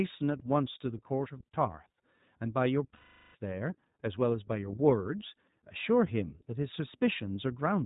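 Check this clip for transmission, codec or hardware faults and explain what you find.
Two faults stand out: the whole clip has passed through a low-rate voice codec, and one stretch of it was lost in transmission.

The iLBC codec runs throughout. The speech was squeezed into a narrowband VoIP coder that rebuilds each 20 ms frame on its own from a compact model of the excitation, consistent with its 15.2 kbps mode. Everything above 4 kHz is cut away, so the speech sounds dull and boxed-in, and the coding leaves a plainly audible rough, slightly synthetic grain on every syllable.

Lost iLBC frames occur from 2.94 to 3.36 s. A run of packets failed to arrive, a gap consistent with about twenty 20 ms frames going missing. With nothing to decode, the receiver filled the hole by repeating the last pitch cycle it had, blended with noise and fading as the loss dragged on. What you hear is a held, faintly buzzy, breathy vowel where the speech should continue. 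Because iLBC frames don't depend on earlier ones, the speech snaps back cleanly right after 3.36 s.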